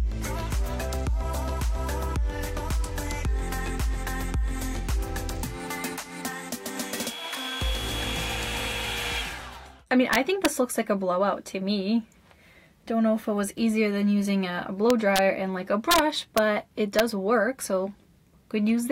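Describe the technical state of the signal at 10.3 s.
At 10.3 s the signal breaks into violent, harsh cracks, far sharper and uglier than ordinary clipping, lasting from 10.13 to 10.46 s. This is integer overflow: the loudest peaks, pushed about 3 dB past the largest value the integer format can hold, wrapped around to the opposite sign instead of being limited. Each offending sample jumps across the full range, producing those brutal snaps on the loud sound.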